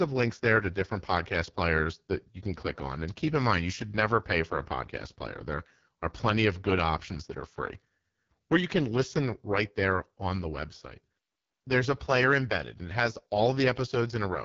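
Throughout the speech, the AMR wideband (HD Voice) codec is running at its lowest quality, which fits the 6.6 kbit/s mode. The pulse-driven vocal tract model starves at this rate, so the speech sounds rough and raspy, with noise-filled upper harmonics and nothing above 7.4 kHz.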